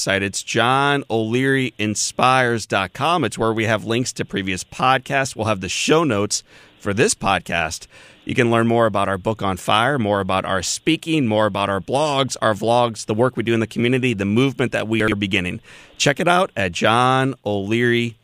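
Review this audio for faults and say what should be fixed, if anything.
At 15.0 to 15.12 s the speech briefly jumbles. These are chunks out of order: one 40 ms chunk arrived two chunks late and plays after the two that should follow it, leaving three hard joins. Reorder chunks by sequence number in a jitter buffer before playback.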